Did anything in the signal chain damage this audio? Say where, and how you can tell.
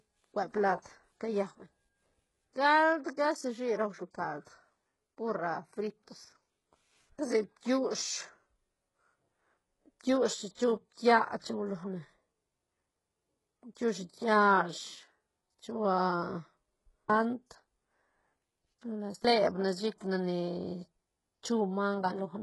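Yes. HE-AAC compression, likely, throughout at the codec stage: heavy damage and nothing above 11.5 kHz, fitting about 12 kbps, with treble rebuilt from copied lower bands.

Pre-echo at 10.54 to 10.58 s (32 ms) and 11.39 to 11.44 s (46 ms), also at the codec: block-spread quantisation noise hisses just before attacks.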